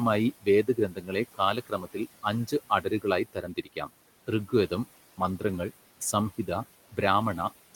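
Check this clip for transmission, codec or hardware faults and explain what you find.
Noise suppressor artifacts run through the whole clip, and the suppressor also clips parts of the speech in four places, all within the first four seconds.

Noise suppressor artifacts, throughout: the suppressor pulls the room noise, sitting about 17 dB under the speech, down by about 17 dB between phrases. A spectrogram shows a patchy, blotchy noise floor that pumps with the speech.

Speech cut by the noise suppressor, at 0.63–1.12 s, 1.34–1.97 s, 2.81–3.05 s and 3.25–3.9 s: quiet speech gets mistaken for noise and dropped by about 14 to 17 dB. The softest parts sound swallowed, showing as thinned energy in the waveform.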